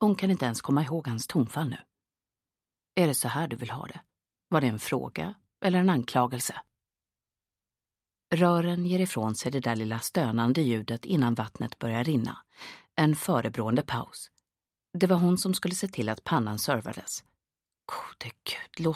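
No faults can be heard anywhere in this audio.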